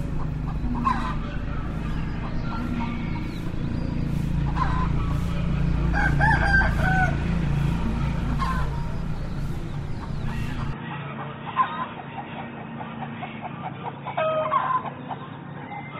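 At 10.73 s the everyday sound turns dull and boxy, with nothing above 3.8 kHz, a drop of roughly 5 dB and a faint new noise floor, with no gap at the change. That points to the input likely switched to a poorer device, not a mere low-pass filter.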